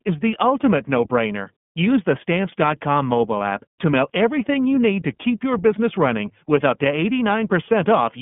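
Throughout, the speech has plainly audible iLBC codec damage: nothing above 3.7 kHz, plus a rough, synthetic grain from independently coded 30 ms frames, unlike clean band-limiting.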